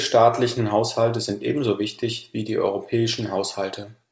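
Speech carried over a call path with no technical faults, its content stopping at 8 kHz as expected from a wideband call codec such as G.722.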